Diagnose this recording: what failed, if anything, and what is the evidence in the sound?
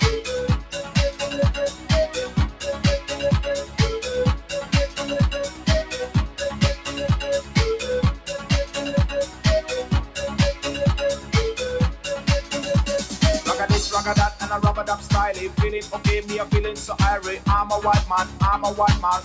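The failure is in call processing: a speech-oriented noise suppressor stayed engaged and treats sustained sound as noise. Level swings around 10 dB, so the audio pumps. The call path's 8 kHz ceiling is normal.

There are sound cuts from the noise suppressor at 0.63–3.09, 3.64–3.79, 4.39–7.56, 8.17–11.34, 11.96–12.51, 14.97–16.0 and 18.25–18.41 s. Held parts sink by about 7–8 dB.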